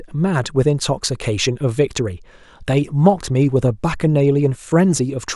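Speech recording; no technical faults found, nothing to flag.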